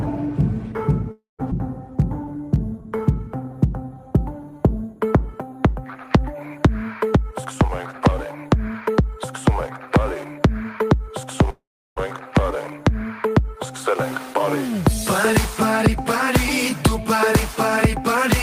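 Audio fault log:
1.11–1.41 s, call audio freeze: the last sound is held as a fading buzz, then about 0.16 s of silence. The likely cause is delayed packets emptying the jitter buffer. The spectrogram shows a smeared band dying into a blank gap, with nothing lost afterwards.
1.51–1.53 s, skip ahead: roughly a fifth of a second of audio is dropped and the two sides are spliced almost directly. The waveform shows an abrupt discontinuity with no gap.
1.90–3.95 s, jitter buffer slow-down: repeated pitch periods add 171 ms, so playback runs at 92% speed with unchanged pitch. The spectrogram shows stretched harmonics with the same spacing.
7.31–11.25 s, jitter buffer speed-up: about 0.2 s of pitch periods is trimmed, so playback runs at 106% speed and sounds hurried. The spectrogram shows compressed timing with harmonic spacing unchanged.
11.50–11.98 s, call audio freeze: a fading buzz fills 0.46 s, about 0.35 s of it silent. 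The likely cause is a stalled packet flow. On the spectrogram, energy smears, then goes blank, then resumes where it stopped.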